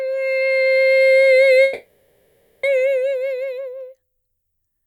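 A music clip in which, from 1.63 to 2.65 s, the playing gives way to a smeared buzz and hiss that carries on the last sound and fades, with no true silence. When the music returns it has jumped ahead, with about a second of it missing. This is likely a long network dropout: no audio arrived for roughly a second, the receiver filled the whole gap by extending the last sound, and playback resumed without the lost section.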